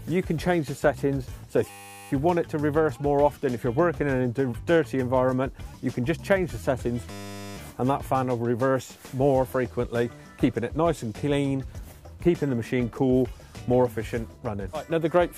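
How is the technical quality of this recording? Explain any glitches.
The recording has two glitches of the same kind. A system hang loop at 1.70–2.11 s and 7.11–7.57 s: a stalled system let the hardware replay one 10 ms buffer, producing a steady 100 Hz buzz.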